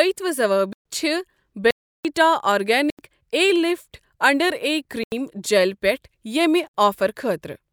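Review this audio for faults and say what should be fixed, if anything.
The speech drops into blocks of digital silence at 0.73 to 0.85 s, 1.71 to 2.05 s, 2.90 to 2.99 s, 5.04 to 5.12 s and 6.68 to 6.74 s. The gaps last 60 to 341 ms. Each cuts in and out with no fade. The matching 85 ms gaps and the 341 ms one fit whole output buffers left unfilled. To prevent this, give the audio thread more headroom or a larger buffer so every block is written in time.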